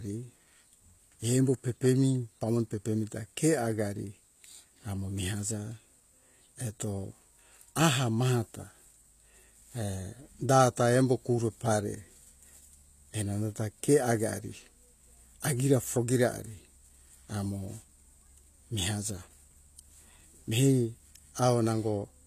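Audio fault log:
throughout HE-AAC compression: gritty, lispy s sounds under treble that stays bright up to 14.9 kHz instead of dulling, likely rebuilt by band replication at a bitrate near 24 kbps.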